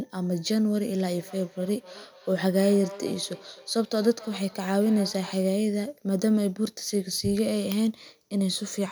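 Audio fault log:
1.12 to 5.56 s, feedback echo between two devices: the speech returns as discrete repeats roughly a third of a second apart, peaking at about 18 dB below the direct signal. Another device in the room is playing this call aloud, and this microphone picks it up again. Its own echo canceller cannot remove sound it did not play. Room reverberation would smear into a smooth tail instead of repeating at a fixed, regular spacing like this.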